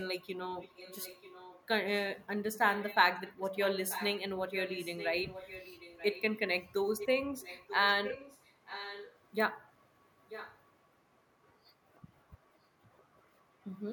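Speech with echo leak: a faint copy of the voice returns 936 ms late at 0–2.08, 2.68–2.96, 3.27–6.22, 6.98–7.08, 7.41–9.17 and 10.29–10.61 s. It sits roughly 15 dB under the speech, weaker at the start and strongest near 7 s. The likely cause is a far-end echo canceller letting its loudspeaker pickup through. A spectrogram shows fainter duplicate harmonic streaks shifted about 0.94 s right.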